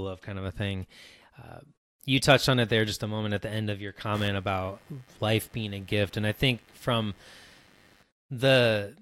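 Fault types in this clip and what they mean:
Computer activity noise: from 4.14 s, just after "the end of your", a buzzy, scratchy chatter pulsing around a hundred times a second runs well beneath the speech until 8.03 s. Shifting processor or peripheral load is disturbing the audio circuit's shared ground. Unlike steady mains hum, which stays constant for the whole recording, this noise switches on and off with the machine's activity and pays no attention to the rhythm of the speech.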